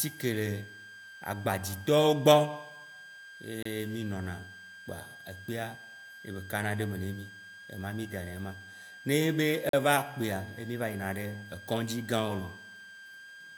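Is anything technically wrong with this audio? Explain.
Yes. A switching supply whistle runs through the whole speech clip. It is a thin tone around 1.6 kHz, wandering between about 1.58 and 1.63 kHz, roughly 20 dB below the speech. A power supply cycling in an audible range puts it there.

There are two gaps between stream segments. One is at 3.63 s, just before "mí nona", lasting 28 ms. The other is at 9.69 s, lasting 42 ms. Segment timestamps don't line up, so the player pads with silence. Each gap is a hard-edged hole, and no audio is lost.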